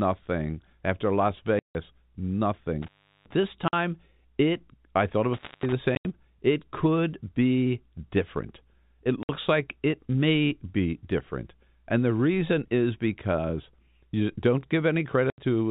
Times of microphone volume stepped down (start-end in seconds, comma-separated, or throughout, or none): none